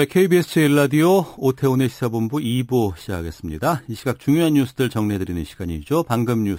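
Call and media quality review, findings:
Metallic fizz throughout, following speech level, mirrored band 6 to 12 kHz about 22 dB down. Imaging from sample-and-hold upsampling: samples repeated without smoothing, fits 12 kHz source raised to 48 kHz.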